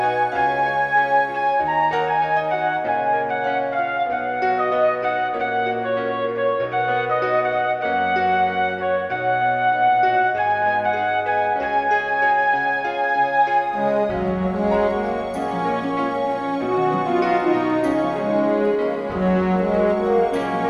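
No technical faults can be heard anywhere in the recording.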